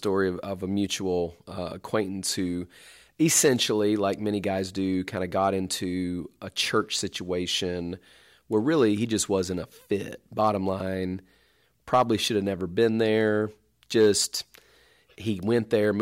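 Speech, with hard clipping on five short peaks: 3.35 to 3.49 s just before "like many guys do", 5.42 to 5.48 s, 10.43 to 10.49 s right after "just wasn't a fit", 11.94 to 12.02 s just before "should have never", and 13.97 to 14.10 s. Each time the level pushes past what a stage can pass, by about 1 to 5 dB, so the waveform tops get squared off and throw up high harmonics. You hear it as a quick crackly edge on those loud moments.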